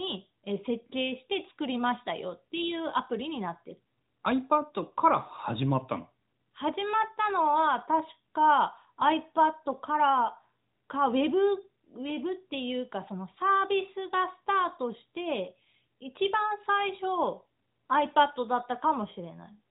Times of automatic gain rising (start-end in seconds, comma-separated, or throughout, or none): none